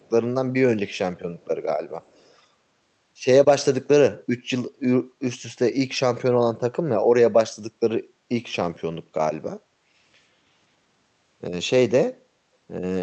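Faint, delayed copies of the speech trail behind it at 0.0 to 0.1 s, 0.93 to 0.98 s, 1.38 to 1.45 s and 2.02 to 2.35 s, lagging about 286 ms and sitting very low. This is echo leak, likely from a far-end loudspeaker whose echo canceller let some pickup through.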